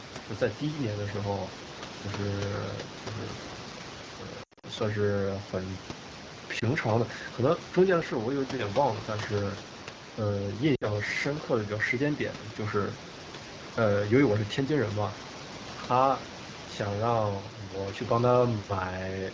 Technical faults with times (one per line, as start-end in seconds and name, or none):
4.43-4.66 lost AMR speech frames
6.59-6.64 lost AMR speech frames
10.75-10.88 lost AMR speech frames